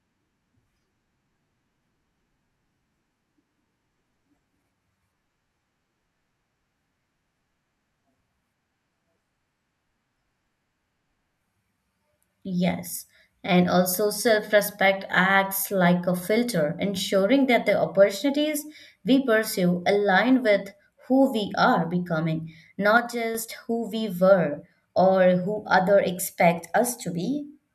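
From 22.97 to 23.35 s the speech drops abruptly by about 6 dB, then returns to full level. This is a one channel drops out fault, likely a stereo channel lost for about 0.37 s, so the mono sum keeps only the surviving side.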